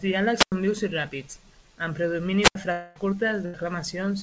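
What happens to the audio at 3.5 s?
A burst of packet loss from 3.45 to 3.55 s: the receiver stretches and fades the last sound, then resumes with about 80 ms of speech missing.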